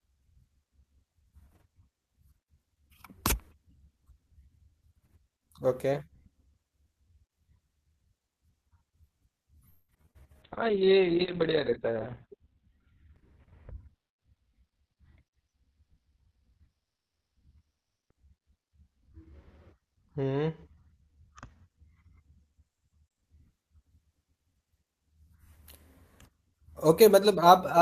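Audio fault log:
9.69 to 10.17 s, repeated packet loss (robotic sound): five gaps in under half a second, the longest about 193 ms, so more than half the stretch is patched by stretching out the previous sound. That's why it goes choppy, with about 100 ms simply gone.
10.44 to 23.29 s, call bitrate drop: the sender's rate falls from 32 kbps to 6 kbps, bottoming out for about 1.7 s. Coding gets coarse and the top end is cut from 20 kHz to 4 kHz, so the speech turns muffled and watery.
13.38 to 15.04 s, jitter buffer speed-up: the receiver was sitting on too much buffered audio and trimmed short pitch-period chunks, roughly a fifth of a second in total. The speech runs at about 111% speed with unchanged pitch, so it sounds hurried.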